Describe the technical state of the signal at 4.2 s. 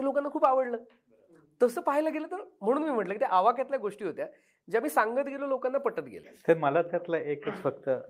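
At 4.2 s the speech signal is intact, with no audible fault at that moment.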